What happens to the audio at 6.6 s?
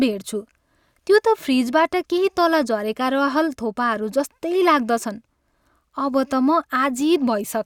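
Nothing goes wrong at 6.6 s; the speech there plays through intact, with no dropout, click or distortion.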